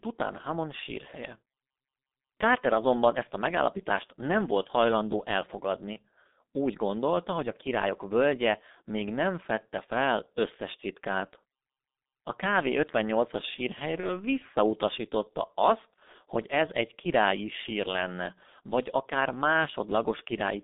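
Throughout, the speech carries G.723.1 codec damage. It is muffled and hoarse, confined to roughly 200 Hz to 3.7 kHz, and the heavy smearing points to a 6.3 kbit/s rate. At 5.93 to 5.97 s and 14.00 to 14.12 s, VoIP packet loss concealed by the speech codec causes a brief buzzy or noisy, fading stretch, which fits one lost 30 ms frame each time.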